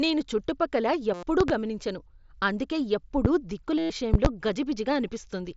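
At 1.14 s the speech breaks up for about 90 ms. This is concealed Bluetooth headset packet loss. A run of packets between headset and phone went missing. The receiver filled the gap by repeating the closest-matching recent stretch of waveform. The result is a short buzzy tone held at full level, with a slight warble as real speech resumes. This mSBC wideband link passes speech up to 8 kHz, so the buzz sits inside that band.

From 1.41 s to 1.52 s comes a loud pop, heard as two sharp clicks in quick succession. They peak around 20 dB above the speech, which keeps going underneath. The likely cause is a voltage spike from a connector, switch, static discharge or driver glitch. Later circuits shape each spike into a pop.

At 3.25 s a single loud pop lands, about 15 dB above the speech. It sounds like a brief thump laid over the talking.

At 3.78 s the packet loss returns for about 112 ms, slightly longer than before. 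The same repeated fragment produces a steady buzz, then a small warble at the hand-back.

From 4.14 s to 4.28 s another double loud pop sounds, again near 20 dB above the speech.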